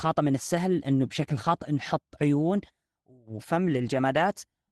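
Speech, carried over an Opus call path whose audio stops at around 12 kHz. From 3.65 to 3.87 s there is a lost packet rebuilt from error correction. The sound turns rougher and noisier for about 120 ms instead of dropping out. Missing packets (the span fits about six) were replaced by the low-bitrate copies that each following packet carries, so the decoder filled the gap with a coarser reconstruction rather than silence.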